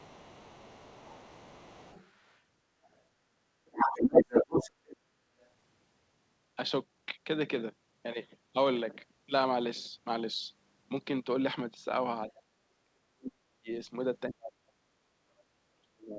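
From the start to 2.41 s, around 2.83 to 2.98 s, from 3.66 to 4.97 s and briefly at 5.42 s, the other side's voice is leaking through. It's faint mostly, but in the 3.66 s stretch it's louder than the talker, likely an echo canceller leaving loudspeaker pickup behind. Later, at 12.38 to 12.54 s, 12.84 to 13.69 s, and from 14.3 s to the end, the speech is suppressed in double talk, dropping steeply to near silence, likely from the canceller ducking both sides at once. Over G.722 at 64 kbps, nothing sits above 8 kHz.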